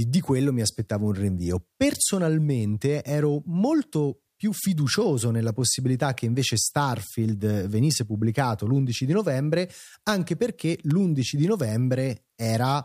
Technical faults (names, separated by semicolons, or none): electrical switching spike